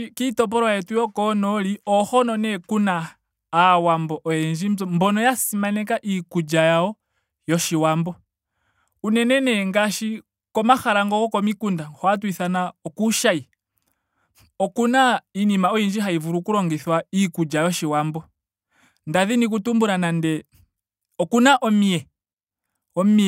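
No technical faults can be heard anywhere in the recording.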